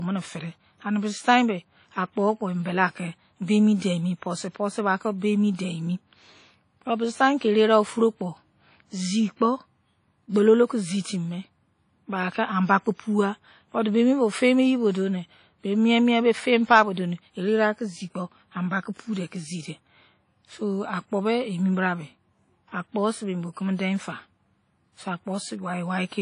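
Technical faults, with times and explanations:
Throughout, WMA compression. The speech sounds ringing and washy, with a hiss that swells and fades along with the talking. Nothing is heard above 10.1 kHz, so the top of the spectrum is cut away. The damage is plainly audible. The likely cause is a transform codec using long blocks, which spreads its quantisation noise over tens of milliseconds around each sound. Faint detail is discarded entirely, which fits a low bitrate near 32 kbps.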